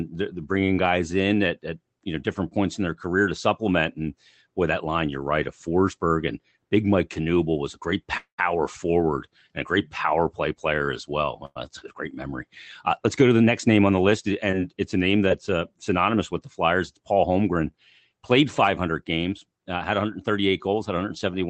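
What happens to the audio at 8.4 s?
A call audio freeze runs from 8.17 to 8.40 s. The last sound is stretched into a fading buzz that drops to silence for about 0.11 s, then the speech resumes where it stopped. This likely comes from delayed packets draining the jitter buffer, adding about 0.21 s of delay with nothing lost.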